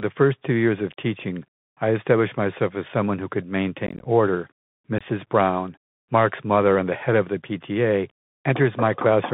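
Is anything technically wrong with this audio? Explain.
Yes. There are two problems: a narrowband Bluetooth codec colours the whole recording, and two brief bursts of dropout break into the speech.

The Bluetooth CVSD headset codec is present throughout. The audio is confined to roughly 150 Hz to 3.6 kHz, which fits a 64 kbps CVSD headset link. This delta-modulation scheme sends a single up-or-down bit per sample and adapts its step size. Fast, bright transients outrun that step, so sibilants come out gritty, a grainy hiss sits under the voice, and the sound is thin and telephone-like. On a spectrogram the energy stops sharply near 3.6 kHz, and a diffuse noise floor fills the band.

Unconcealed Bluetooth headset packet loss occurs first from 3.87 to 4.06 s, just after "as someone who could". About 105 ms of audio is missing, scattered over roughly 180 ms in gaps no longer than 15 ms. The pattern suggests around fifteen lost packets that were replaced with silence or an idle pattern. 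It sounds like a rough, crackly chop with hard edges. A shorter hole of about 22.5 ms follows at 4.98 to 5.01 s. On the waveform both show as gaps with abrupt edges, and on the spectrogram as thin vertical slivers.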